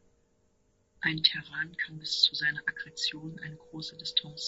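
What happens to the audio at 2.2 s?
At 2.2 s the speech sounds rough and grainy, as it does through the whole clip, with a hiss filling the gaps between harmonics and a dull or oddly synthetic top end. This is likely low-delay AAC compression of the AAC-ELD kind, whose short frames resolve pitch harmonics poorly; the damage is plainly audible and fits a low rate around 32 kbps. On a spectrogram the harmonic stripes look smeared with noise between them, and the upper band appears thinned or patchy.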